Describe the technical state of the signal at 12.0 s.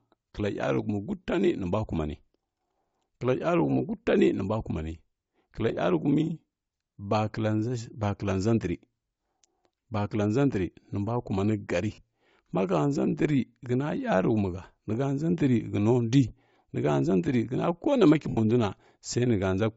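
At 12.0 s the signal has just recovered from lost LE Audio frames, a gap from 11.94 to 11.98 s right after "ndri nimbua kumani gari". For those 40 ms the decoder repeated the last spectrum with randomised signs, so the sound turns into a brief noisy smear, consistent with roughly four 10 ms frames missing.

Throughout, including this moment, the speech has a plainly audible breathy, grainy upper range with a thinned top end. This is likely Bluetooth LC3 compression at a low bitrate, which zeroes much of the high spectrum and fills it with noise.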